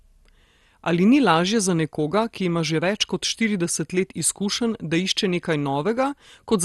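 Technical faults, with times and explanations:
Throughout, MP2 compression: the speech is dull, with nothing above 12.2 kHz and a plainly audible gurgling, granular roughness, likely from MPEG Layer II coding at a low bitrate, which fits about 64 kbps, where upper sub-bands drop out and the remaining bands are coarsely quantised.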